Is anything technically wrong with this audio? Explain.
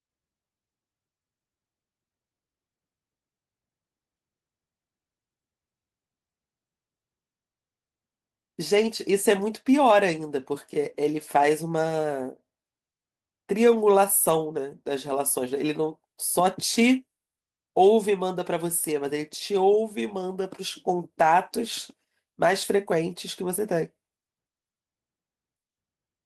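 Yes. At 14.27 to 14.41 s, a lost packet was rebuilt from error correction. Low-bitrate copies in following packets filled about 80 ms, so the speech turns rougher and noisier without gaps.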